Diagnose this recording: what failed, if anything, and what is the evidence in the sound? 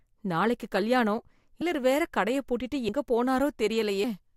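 At the codec stage, compressed frames were skipped: a few whole frames, likely missing from the file or rejected by the decoder as damaged, never reached playback. At 2.88 s, right after "வேற கடைய பூட்டிட்டு", the speech jumps ahead by roughly 70 ms, around three 24 ms frames.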